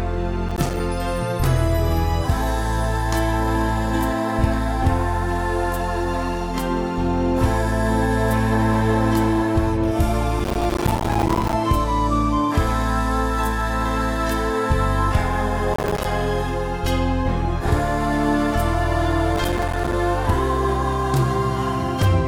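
Processor overload crackle occurs at 0.49–0.80 s, 10.39–11.53 s, 15.74–16.05 s and 19.36–19.93 s. Many buffers of a few milliseconds each miss their deadline and drop to silence. The result is a dense gritty tearing rather than an isolated click or dropout.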